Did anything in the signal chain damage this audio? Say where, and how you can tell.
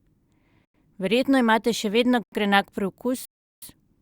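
Yes. Three blocks of digital silence point to the driver or buffer stage: 0.65–0.74 s, 2.23–2.32 s and 3.25–3.62 s. The speech drops to silence with no fade. The 93 ms gaps fit one unfilled 4096-sample buffer; the 372 ms gap fits four.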